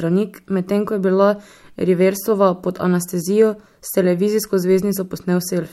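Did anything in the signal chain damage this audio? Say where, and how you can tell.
No, no signal-chain damage detected.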